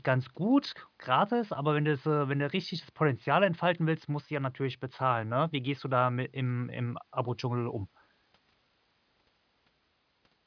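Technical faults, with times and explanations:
No technical faults can be heard anywhere in the recording, and the signal stays continuous and stable throughout.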